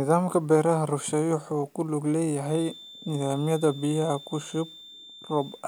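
From 2.43 s to the end of the speech, a thin, steady whistle at 3.6 kHz sits well beneath the talking, roughly 20 dB down, swelling and fading slowly in level but never growing. This is a feedback whistle, likely caused by a loudspeaker-to-microphone loop whose gain is just under the point of runaway, so a single high frequency keeps recirculating and ringing without building into a full howl.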